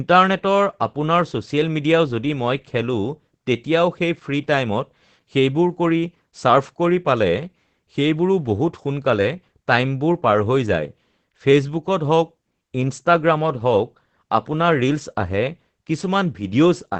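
Opus voice compression runs through the whole speech clip. Nothing sounds above about 8.7 kHz. That cutoff points to wideband operation of the SILK linear-prediction coder. The band is narrowed and the excitation is coded coarsely. The damage is plainly audible. The speech sounds muffled and dull. It also has a hoarse, slightly robotic edge. That fits a low bitrate of around 12 kbps.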